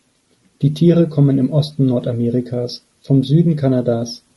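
A short speech recording carries plainly audible low-delay AAC compression from start to finish. The voice sounds rough and grainy, the damage fitting a low-delay AAC codec such as AAC-ELD at around 32 kbps as the likely cause. Its short frames resolve pitch harmonics poorly, so on a spectrogram the harmonic stripes look smeared, with noise filling the gaps between them and a thinned or patchy upper band.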